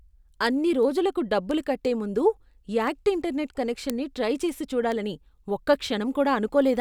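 A speech recording carrying word clock ticks from about 0.15 s to 6.62 s: around twenty sharp clicks, roughly one every third of a second. The receiving device's clock drifts against the sender's by something like 70 ppm, so each time they slip a single sample is dropped or repeated. On a spectrogram these show as thin, evenly spaced vertical broadband lines. In the waveform each is a one-sample step or glitch.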